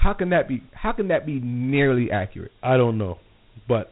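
Dialogic VOX ADPCM damage runs throughout the speech. Each sample is coded as a 4-bit step from a running prediction, consistent with a 32 kbps stream at 8,000 samples a second. Nothing remains above 3.8 kHz, and a gritty hiss clings to the speech.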